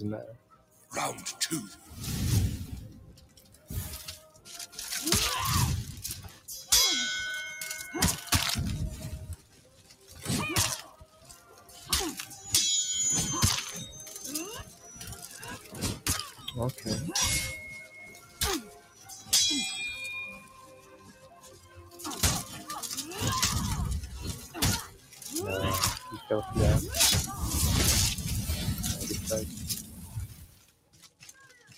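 A speech-tuned noise suppressor stays engaged through the whole clip and mistakes steady tones, ambience and decays for noise. Its gain swings by roughly 15 dB, so held sound and tails sink while attacks pass, leaving a pumping, thinning result.

The sound is cut by the noise suppressor from 0.32 to 6.48 s, 9.36 to 11.89 s, 14.64 to 22.0 s, 24.43 to 25.25 s, and 29.49 s to the end. Within these spans, sustained parts drop by about 13 dB in the first, second and last, and about 11 dB in the other two, so decays end abruptly.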